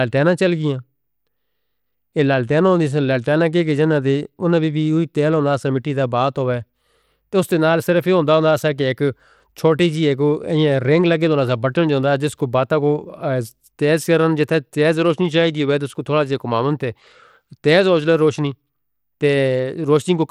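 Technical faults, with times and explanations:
Throughout, Bluetooth SBC compression: nothing is heard above about 17.3 kHz, and the speech carries a plainly audible gritty, grainy edge, with the upper treble thinning and flickering as coarse quantisation starves the top sub-bands. The likely cause is SBC at a bitrate around 96 kbps.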